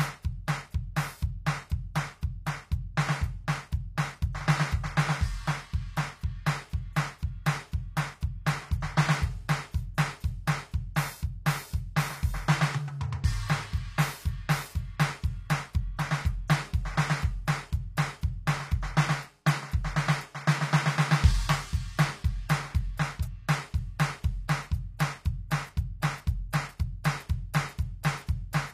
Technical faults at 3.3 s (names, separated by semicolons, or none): HE-AAC compression